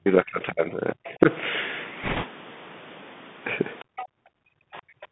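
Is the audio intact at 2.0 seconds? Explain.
No. The whole clip runs through the Bluetooth CVSD headset codec, which codes each sample as a single up-or-down bit with an adapting step and passes only about 150 Hz to 3.6 kHz. The speech sounds narrow and boxed-in, with scratchy s sounds and a granular hiss beneath.

Just after, from 2.03 to 2.26 s, bit errors on a Bluetooth voice link corrupt roughly one bit in twenty. Each bit carries little weight and the errors fade quickly, so the speech picks up a rushing, crackly noise rather than sharp clicks.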